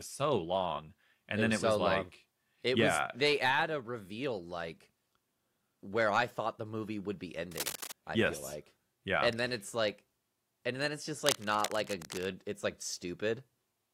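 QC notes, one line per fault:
7.51–7.92 s and 11.25–12.27 s, cable scratch noise: dense, uneven bursts of scratchy rustle sit only slightly below the speech, after "the movie would be" and after "and then it's just". This is likely a worn connector shifting its contact. It is gritty and irregular, unlike isolated clicks or low handling thumps.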